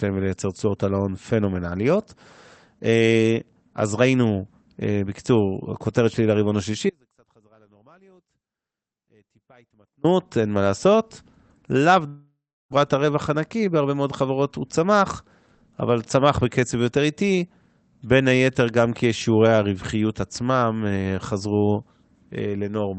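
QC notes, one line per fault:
6.90–10.04 s, audio dropout to a faint residue: speech cuts out abruptly for about 3.1 s, leaving only faint sound about 35 dB down. The signal was likely lost while the path stayed live.
12.07–12.74 s, long network dropout: the last sound continues as a fading buzz or hiss, then about 0.33 s of silence. About 0.6 s of speech never returns, likely because packets stopped arriving.
13.36–13.90 s, jitter buffer speed-up: speech runs at 108% speed with unchanged pitch and sounds hurried. Short pitch-period pieces, about 50 ms in all, were cut to reduce buffered delay.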